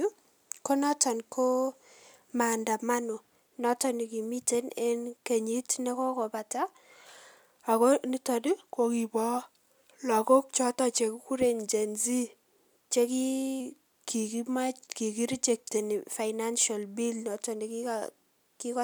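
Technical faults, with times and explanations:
8.47–9.38 s and 13.60–15.78 s (after "che ki", resuming at "financial bill noto"), drift correction step: the speech abruptly slows by about 5.6% and drops a full semitone, then snaps back, likely a clock-matching resampler adjusting its buffer. Unlike wow, the shift is a flat step, not a wavering glide.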